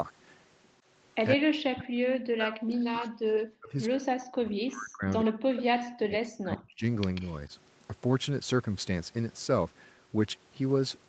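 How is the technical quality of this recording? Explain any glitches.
The recording has two clear glitches from echo cancellation in a call: the talker is repeatedly turned down, and faint delayed copies of the voice come back. The audio is band-limited at 8 kHz, consistent with an Opus call codec at around 32 kbps.

Speech suppressed in double talk, 1.35 to 6.83 s and again at 7.5 s: the echo canceller likely mistook simultaneous talking for loudspeaker echo and attenuated it. For roughly five seconds the voice dips, falling by as much as about 40 dB. The brief second dip is only about 5 dB.

Echo leak, 5.25 to 5.61 s and 7.15 to 7.36 s: the far side's loudspeaker echo was likely not fully cancelled, so part of it was sent back. You hear a delayed copy of the voice, about 15 dB below the speech, trailing by 104 ms and then by 140 ms.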